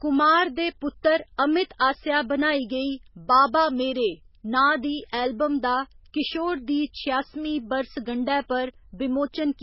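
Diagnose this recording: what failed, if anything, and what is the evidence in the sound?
The codec stage failed: the speech was most likely squeezed through MP3 compression at a very low bitrate, around 16 kbps. With so few bits, the encoder discarded everything above 5.5 kHz, so the sound is dull and muffled throughout. The damage is heavy, with weak frequency lines dropping in and out between frames. That produces a watery, swirling texture and metallic chirps on sibilants, and consonant onsets lose their edge.

Pre-echo, also a codec-stage artefact, appears twice. A hiss comes just ahead of a sharp onset at 1.03 s, right before "अमित आसेआ बनाई गेई", spreading about 17 ms early. It happens again at 6.93 s, just after "एल्बम दा किशोर दी", spreading about 10 ms. In each case the attack landed late in a transform block. The quantisation noise sized for the loud onset spread back across the quiet moment before it, so the attack sounds smeared.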